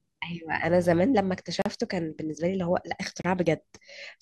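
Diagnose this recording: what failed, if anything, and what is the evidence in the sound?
A likely Bluetooth stall in the wireless playback link: interference held back packets, the headphones' buffer emptied, and output paused until retransmissions arrived. The speech cuts to silence for 37 ms from 1.62 to 1.66 s and for 28 ms from 3.22 to 3.24 s, then resumes.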